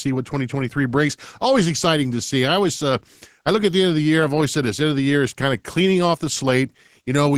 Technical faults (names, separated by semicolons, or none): none